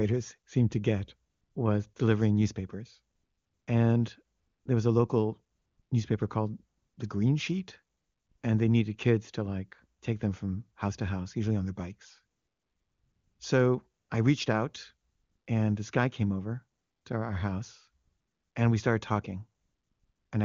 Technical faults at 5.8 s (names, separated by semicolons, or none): AMR comfort noise